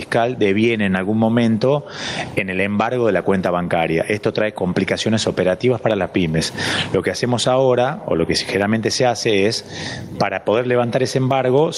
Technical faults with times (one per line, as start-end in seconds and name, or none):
0.00-11.77 gain pumping